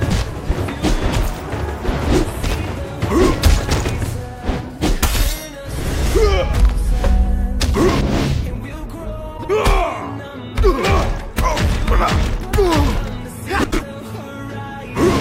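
Two adjacent runs of frames were decoded in swapped order (frames out of order) at 9.37–9.50 s and 13.63–13.81 s, with halves of about 52 ms and 78 ms, fitting runs of two and three frames. Each stretch sounds like a garbled flutter, and no time is lost.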